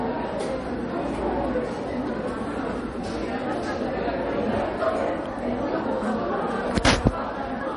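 From start to finish the sound is dull and watery. Nothing is present above about 10.6 kHz, and the fainter detail has a swirling, metallic chirp to it. Transients smear instead of landing cleanly. The likely cause is MP3 compression at a low bitrate, something around 40 kbps. With so few bits, the encoder cuts the treble at a fixed point and drops weak frequency lines, which switch on and off from frame to frame.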